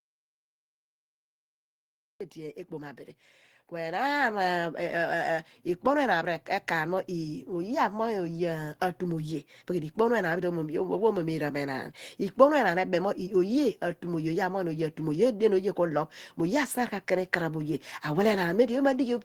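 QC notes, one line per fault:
0.00–2.21 s, audio dropout to silence: the clip opens in silence with no room tone at all. Speech then arrives abruptly. The input was likely lost for this stretch while the recorder kept writing silence, so that audio is gone.
2.35–5.06 s and 6.26–11.89 s, automatic gain rising: voice and background swell together. The rise is about 8 dB in the first span and about 4 dB in the second. Automatic gain control judged the input too quiet and raised its gain gradually over several seconds.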